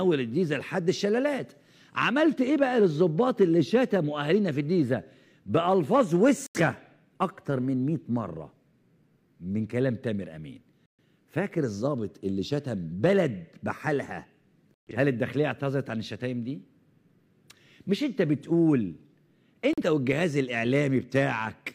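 Four digital broadcast dropouts occur, at 6.46 to 6.60 s, 10.86 to 11.03 s, 14.74 to 14.92 s and 19.73 to 19.82 s. Each time the receiver stopped getting valid frames and muted until good ones arrived, so the audio drops cleanly to silence and then resumes further along, with the missing material gone. The lost stretches are about 85, 128, 128 and 43 ms, all multiples of roughly 43 ms, which suggests whole frames being discarded. There is no stutter or smeared repeat, which sets these apart from analogue interference or packet-loss concealment.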